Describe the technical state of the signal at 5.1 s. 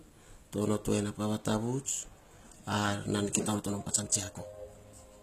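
At 5.1 s the audio sits inside a time-stretched section that runs from 3.41 s to the end. The pace jumps to about 1.64 times normal, so the speech sounds rushed. The pitch stays put, which sets this apart from a plain speed-up or resampling fault, where the pitch would rise with the tempo. The likely cause is software squeezing the passage to fit a length by dropping short pieces.

The whole clip, this moment included, shows plainly audible damage from what is likely HE-AAC compression, which fits a low bitrate near 20 kbps. The treble reaches up to about 14.9 kHz, but that region is rebuilt from copied lower bands rather than carried through. A simple low-pass filter would instead leave the top dull and empty.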